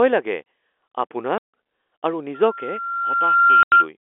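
At 1.38 s the speech breaks into a hole of silence ending at 1.42 s. This is packet loss filled with silence: the receiver substitutes silence for missing packets, so the gap has hard edges. A second 90 ms gap at 3.63 to 3.72 s, consistent with three 30 ms packets, cuts through the squeal. From 2.34 to 3.88 s a loudspeaker feedback squeal builds at 1.4 kHz, well within the narrow telephone band. The microphone re-captures the loudspeaker, and loop gain above one at that frequency lets the tone grow over roughly a second and a half to about 10 dB above the speech.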